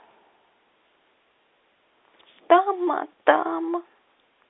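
Speech carried over a normal G.711 telephone path, its band running from about 300 Hz to 3.6 kHz with nothing above 3.8 kHz, and no technical fault to report.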